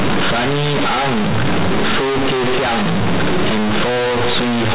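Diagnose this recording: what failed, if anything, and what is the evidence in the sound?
The failure is at the sample-format conversion stage: mu-law companded audio read as linear 8-bit samples, with no expansion. From start to finish the speech is harsh, buzzy and uniformly loud, and the pauses carry strong noise. Each byte's sign bit throws the output across half its range, so quiet passages come out as loud as peaks. Overload clipping would leave the pauses quiet. The telephone band limit below 4 kHz still comes through.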